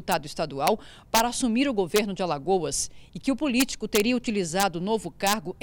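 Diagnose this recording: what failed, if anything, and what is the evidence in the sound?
Integer overflow in an integer gain or sample-format stage: cracks at 0.12, 0.67, 1.15–1.20, 1.96–1.98, 3.60–4.00, 4.60–4.63 and 5.27–5.33 s. Peaks only about 0 to 2 dB over full scale wrap to the opposite sign instead of limiting, so each one snaps far harsher than clipping.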